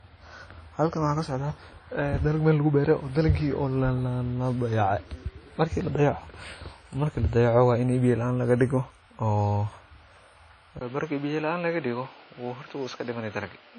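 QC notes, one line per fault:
Throughout: low-bitrate audio saved at a high bitrate. Everything above 10 kHz is empty, and the sound carries the swirly, smeared texture of a heavily compressed earlier encode. This points to a low-rate source, such as WMA near 32 kbit/s, that was likely re-saved as a much larger MP3. The second pass cannot restore what the first removed. On a spectrogram there is a hard, flat ceiling at 10 kHz with blotchy, quantised detail below it.
10.79–13.79 s: input switched to a poorer device. After a silence of about 20 ms the sound turns duller and boxier. The band stops at 6.4 kHz, the level falls by roughly 5 dB, and a new noise floor sits about 30 dB under the signal. This is likely a change to another microphone or a headset call profile. On the waveform there is a short flat gap and then a smaller envelope. On the spectrogram the top of the band drops abruptly from 10 kHz to 6.4 kHz, with a constant haze of noise filling the pauses.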